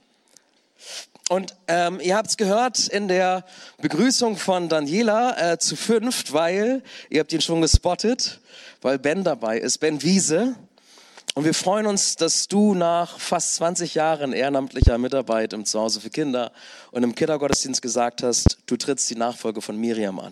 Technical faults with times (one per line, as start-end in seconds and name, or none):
7.74-7.77 loud pop
14.82-14.90 loud pop
17.53-17.56 loud pop
18.46-18.49 loud pop